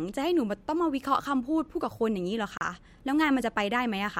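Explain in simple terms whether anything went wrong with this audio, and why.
The speech cuts to silence for about 35 ms, from 2.58 to 2.61 s, then carries on. This is a Bluetooth stall, likely from interference delaying wireless packets.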